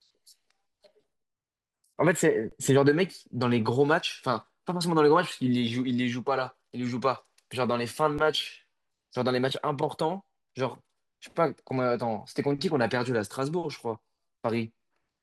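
Speech with two brief dropouts, at 2.50 s for 20 ms and at 8.18 s, where the sound freezes flat: underrun with held sample, losing about 20 ms and a few milliseconds of audio.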